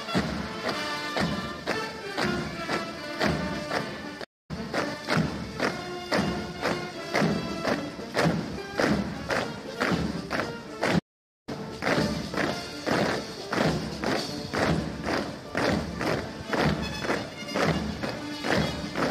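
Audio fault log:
4.23–4.51 s and 10.99–11.49 s, playback stall: the sound halts mid-flow and the output goes fully silent, for about 0.25 s the first time and about 0.48 s the second, before carrying on. The likely cause is the player running short of data or its thread being blocked until it recovered. A dead gap that holds this long marks it as a stall rather than a corrupted-frame glitch, which is far shorter.
4.93 s, 8.57 s, 15.82 s and 18.02 s, damaged data in a compressed stream: each is a brief chirp or blip lasting under 20 ms. The decoder hit bad bytes, misread the frame, lost sync and skipped ahead to the next valid frame header. Unlike a stall, the glitch is over almost at once.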